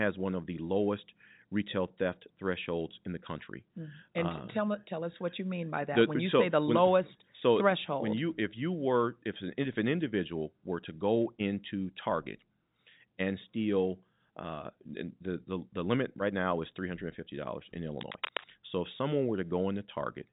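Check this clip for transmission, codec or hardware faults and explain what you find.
There's one fault, a short burst of cable scratch noise from 18.01 to 18.50 s, right after "and fifty dollars in". It's a dense, uneven scratching that's nearly as loud as the speech, heard through a telephone-band path that stops around 3.8 kHz. The likely cause is a worn cable or connector being moved, with its contact resistance jumping around.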